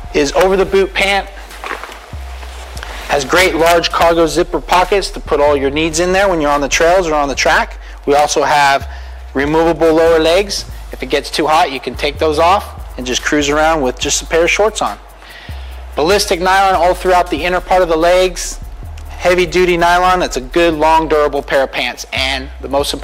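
No technical faults can be heard anywhere in this audio.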